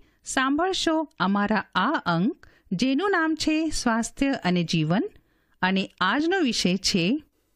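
No technical faults can be heard anywhere in this speech recording. Nothing in it breaks, drops out or distorts at any point.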